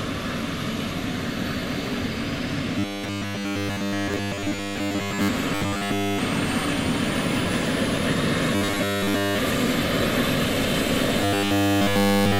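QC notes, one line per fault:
2.79–5.29 s, 5.55–6.19 s, 8.55–9.39 s, 11.22–12.39 s (to the end): robotic sound from repeated short buffers. The audio becomes a rigid, metallic buzz at a fixed 100 Hz that only loosely tracks the underlying sound. In the 8.55 s stretch it is partly broken up. This is likely caused by starved playback looping the last 10 ms of audio in place of incoming audio. Nearly all of the audio is replaced in three stretches, and most of it in the 8.55 s stretch.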